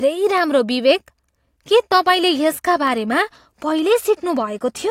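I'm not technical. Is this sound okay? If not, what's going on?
No. The recording system likely lost a handful of samples (dropped samples) three times, so the speech waveform jumps abruptly from one point to a later one. Each jump is too brief to remove any sound but makes a sharp click, at 0.38, 2.87 and 4.07 seconds.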